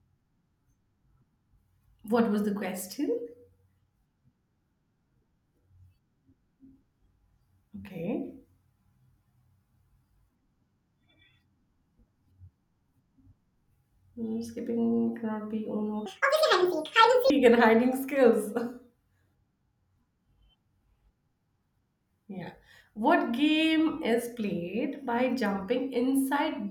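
From 16.06 to 17.30 s there is a section at the wrong speed, most likely because the player or an edit ran this stretch against the wrong clock. The audio runs at 1.81 times its recorded rate, so for just over a second the speech becomes hurried and squeaky, its pitch lifted by roughly ten semitones. The rate and pitch snap back to normal at the end of the stretch.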